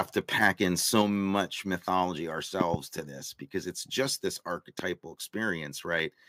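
It's a speech clip. The loudest peaks at 0.43–0.48 s and 0.95–1.02 s crackle with microphone overload, likely from the input gain being set too high, pushing about 2 dB past the converter's limit and squaring off their tops. Right at 1.02 s the level drops by about 4 dB, which sounds like the microphone volume being stepped down, likely by the call software reacting to that clipping. There's a loud pop too, a double one at 2.61–2.76 s just before "to this because it's", then a single one at 4.79–4.82 s right after "because it's just this", roughly 20 and 15 dB above the speech, likely from electrical transients such as a plug, switch or static discharge.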